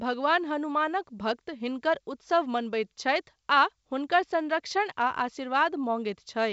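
Nothing in this speech recording stands out as a fault; it simply carries the usual character of G.722 wideband telephone coding, with the sound stopping short at about 7.7 kHz.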